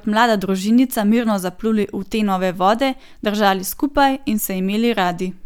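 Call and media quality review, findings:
No faults found in the speech audio. No dropouts, distortion or timing problems were detected.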